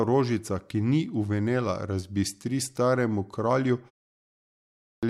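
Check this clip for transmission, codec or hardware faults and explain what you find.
One fault is audible. At 4.43 s, after a 0.61 s pause, speech breaks abruptly out of silence with about 0.6 s swallowed until 5.03 s. This is a clipped start after a pause: the output device dozed during the silence and woke too late.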